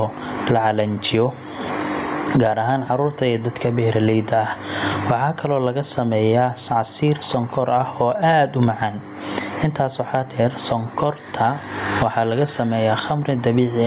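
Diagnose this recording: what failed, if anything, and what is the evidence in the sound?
Gain pumping throughout: the gain swings around 25 dB, pulling down under loud speech, likely from excessive input gain driving a fast limiter.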